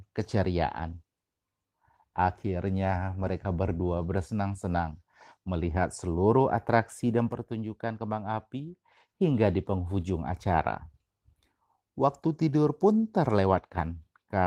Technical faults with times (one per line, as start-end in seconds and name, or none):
7.32-9.09 one channel drops out
13.60-13.77 one channel drops out